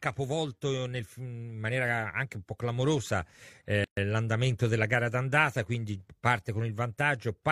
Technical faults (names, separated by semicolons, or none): gap at a join of encoded pieces